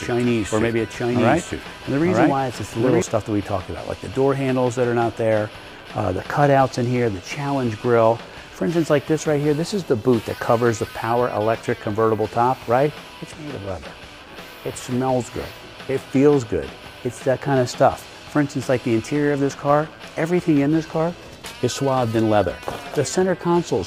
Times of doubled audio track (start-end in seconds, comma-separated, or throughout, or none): 0.00-3.02